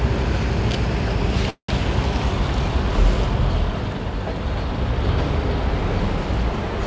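At 1.50 s the sound stalls for about 0.19 s, until 1.69 s. That's a call audio freeze, likely from packets arriving late and draining the jitter buffer. The receiver stretched the last bit into a fading buzz, then 100 ms of silence, before picking up right where it left off. Nothing's lost, but everything after plays 185 ms late. Throughout, nothing sits above 8 kHz, which fits a G.722 call codec.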